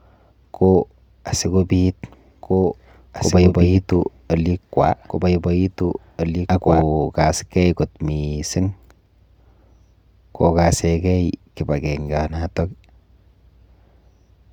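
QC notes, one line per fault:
2.43–6.83 s: doubled audio track. A second full-band copy of the speech trails about two seconds behind at around 5 dB lower. It has no decay or room tone and it cuts in and out abruptly. The likely cause is a slower second capture path or a misaligned edit. On a spectrogram the speech patterns appear twice, offset by two seconds, with hard vertical edges at both ends of the span.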